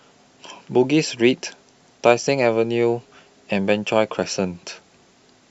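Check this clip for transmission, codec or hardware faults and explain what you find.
One transmission fault stands out in this speech: lost LE Audio frames at 2.25 to 2.27 s. The light codec softening across the clip belongs to ordinary lossy compression rather than a fault.

Lost LE Audio frames, 2.25 to 2.27 s: about 15 ms of audio went missing, which fits two dropped frames. The LC3 decoder filled the gap by repeating the last spectrum with randomised signs, so voiced tone briefly smears into noise. On a spectrogram, harmonics blur into a short diffuse patch; the waveform shows a brief noisy stretch.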